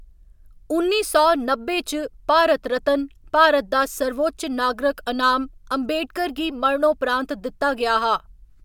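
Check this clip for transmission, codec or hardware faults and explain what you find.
No faults can be heard.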